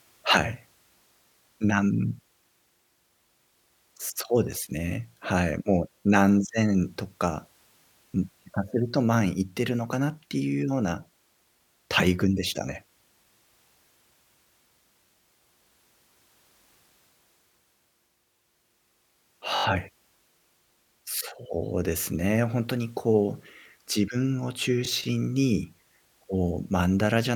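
Speech with a repeated buffer stutter at 6.02–6.04 s, 19.56–19.65 s and 24.85–24.88 s: a 21 ms slice replays (four extra times at 19.6 s), fitting a 1024-sample buffer. The waveform shows identical copied blocks with hard joins, and the spectrogram shows repeating vertical seams.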